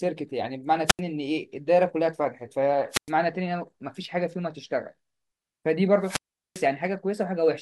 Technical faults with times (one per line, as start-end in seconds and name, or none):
0.86-1.00 wireless microphone squelch dropout
2.91-3.10 wireless microphone squelch dropout
6.02-6.66 wireless microphone squelch dropout